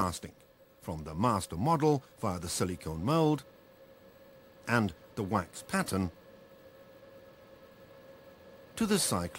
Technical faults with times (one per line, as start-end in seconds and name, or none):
none